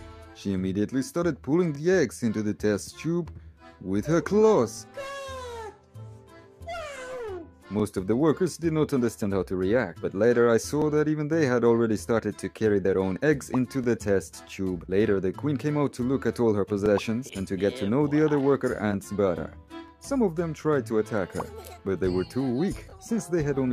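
Overlapping chunks stutter at 1.75, 4.77, 7.80, 10.82, 13.84, 16.86, 19.88 and 22.90 s. Each 3.0 s chunk begins before the previous one ends, replaying about 21 ms at every join. On a waveform each join shows a repeated segment and discontinuity. A spectrogram shows vertical lines.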